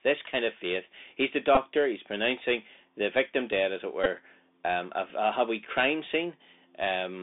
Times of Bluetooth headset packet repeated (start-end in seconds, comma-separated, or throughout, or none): 1.55, 4.04-4.07, 5.10-5.12